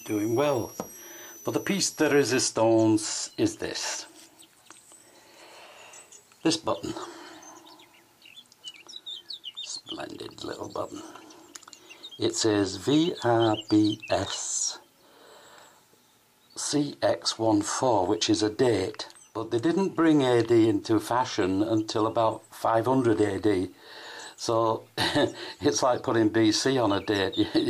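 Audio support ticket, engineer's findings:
Switching supply whistle, 0.0–2.43 s. High tone wandering between 5.63 and 6.04 kHz, roughly 20 dB under the programme. Probable component: switch-mode PSU, either running in audible burst mode or beating against a second supply. Ripple couples into the analogue path.

Differential: the moving pitch rules out a fixed-frequency interference whistle. A stray oscillator or line-scan tone would hold one frequency. Here the pitch shifts within that 5.6–6.0 kHz band, as a supply does when its load changes.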